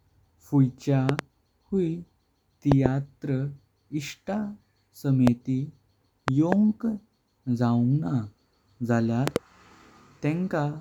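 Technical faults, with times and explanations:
1.09–1.21 s, 2.72–2.88 s, 5.27–5.30 s, 6.28–6.55 s and 9.28–9.38 s: loud pops, a sharp pair of pops each time except a single pop at 5.27 s, peaking about 20 dB above the speech. The likely cause is a sudden voltage step from a plug, switch, static discharge or driver glitch, which the downstream circuits shape into a brief thump while the speech carries on beneath it.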